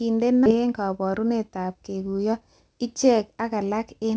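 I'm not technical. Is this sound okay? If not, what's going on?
No. At 0.46 s there is a skip ahead: roughly three quarters of a second of speech vanishes, and unlike a dropout there is no silent gap, just an abrupt jump. From 0.55 to 2.48 s a jitter buffer speed-up makes the speech run about 11% fast to catch up after a delay. Unlike a sped-up recording, the pitch stays the same.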